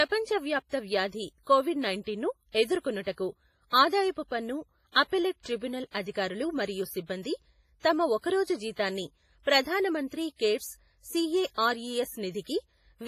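The whole speech clip has a washy, ringing quality with a hiss that swells and fades along with the talking, and nothing comes through above 15.3 kHz. That's most likely WMA compression, and pretty heavy damage at that. The character fits an early WMA encoder squeezed down to roughly 24 kbps. Long transform blocks smear the quantisation noise over tens of milliseconds, and the weaker spectral detail simply gets dropped.

On top of that you can pick out pre-echo six times. The first is at 2.52 to 2.55 s, right after "వ్యాప్త వ్యాధి కొవిడ్ నైంటీన్ను". The others fall at 3.03 to 3.07 s, at 4.92 to 4.95 s between "ఆదాయపు పన్ను" and "అప్పెల్లేట్ ట్రిబ్యునల్ అధికారులు మరియు", and at 5.91 to 5.94 s just before "అధికారులు మరియు సిబ్బంది". The last two are at 9.43 to 9.47 s and 11.54 to 11.58 s. Each time a sharp onset lands late in a block. The noise that's sized for the loud part spills backwards into the silence before it, so you hear a brief hiss about 28 to 44 ms ahead of the attack, and the attack itself comes out soft.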